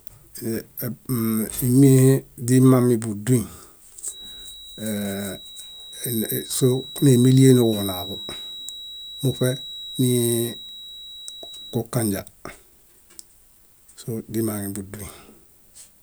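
From about 4.04 s to 11.85 s there's a feedback whistle under the speech: a thin, steady tone at 3.9 kHz, sitting roughly 20 dB below the voice and swelling and fading slowly in level. The likely cause is a loudspeaker-to-microphone loop hovering right at the edge of feedback, so that one frequency keeps ringing without building up into a howl. It stops at 11.85 s.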